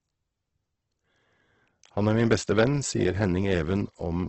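Throughout the clip, the speech has likely passed through Opus compression in its CELT music mode, limited to a wideband range and starved of bits. Rather than leaving gaps, the encoder fills weak bands by folding lower content upward or with noise. The damage is heavy: the sound turns grainy, rough and noisy rather than swirling, and nothing survives above about 8.2 kHz, which fits a bitrate near 12 kbps.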